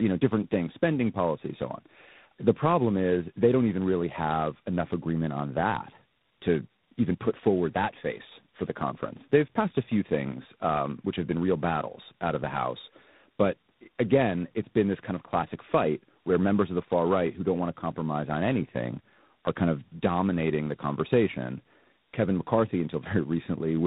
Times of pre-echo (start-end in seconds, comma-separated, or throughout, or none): none